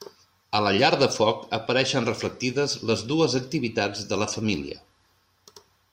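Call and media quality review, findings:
No faults found in this speech recording.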